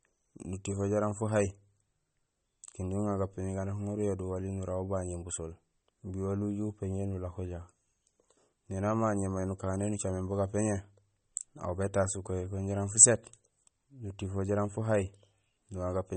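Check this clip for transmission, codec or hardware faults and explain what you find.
One codec fault runs through the whole recording. MP3 compression, present from start to finish, is the likely cause of what is heard: the encoder appears starved of bits, which fits a low bitrate around 32 kbps, so it discards treble above a fixed cutoff and drops weak frequency lines that flicker in and out between frames. Nothing survives above 8.4 kHz, leaving the speech dull, and the damage is plainly audible as a watery, swirling texture with metallic chirps on s sounds and smeared consonant attacks.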